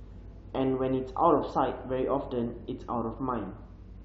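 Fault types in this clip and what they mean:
Compressed frames skipped: A single frame of the compressed speech was never decoded, either missing from the stream or rejected as damaged, so playback jumped straight past it. At about 1.50 s, roughly 20 ms of audio drops out, which fits one frame of about 23 ms. The speech lurches forward slightly at that point.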